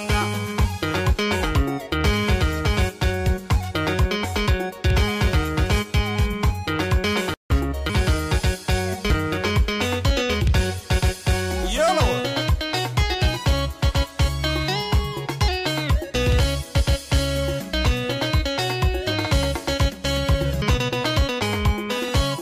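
Dropped buffers (overrun) at 7.9 s, 9.1 s and 20.62 s: each is a point where the sound jumps ahead with no gap, as though a slice were cut out and the ends butted together. The first skip is the largest, roughly a third of a second, and the other two lose about a tenth of a second each. The likely cause is recording software falling behind, so the hardware overwrote audio before it was collected.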